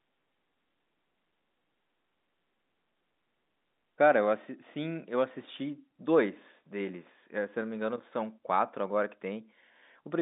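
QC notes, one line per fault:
No faults found; telephone-band speech with the 200 Hz to 3.7 kHz line band and nothing above 3.8 kHz, which fits G.711 A-law at 64 kbps.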